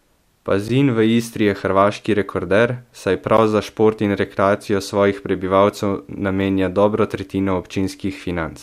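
Gap at a join of encoded pieces, at 0.68 s and again at 3.37 s: the speech drops out for about 11 ms each time and then resumes where it left off. The audio appears to have been encoded in separate pieces and spliced back together untrimmed, so each piece's leading encoder delay and padded final frame survive as a short hole. The edges are sudden but softened by the codec, giving a brief break.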